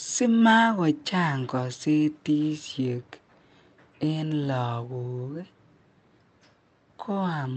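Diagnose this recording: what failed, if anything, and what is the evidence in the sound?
Listening through the speech in this recording, nothing stood out that would point to a failure at any stage of the chain.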